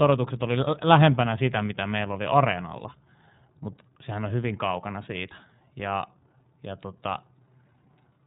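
Throughout, the speech has passed through the iLBC codec, coding each frame's excitation independently at a rate that fits 13.33 kbps with 30 ms frames. Nothing above 3.9 kHz survives, so the sound is narrowband and muffled, with a plainly audible rough, synthetic edge.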